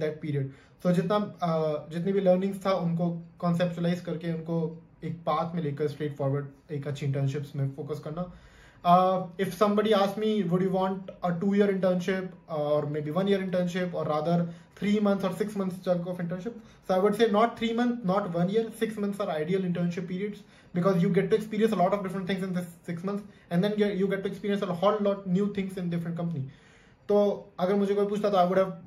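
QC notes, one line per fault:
Nothing stood out on listening to this audio.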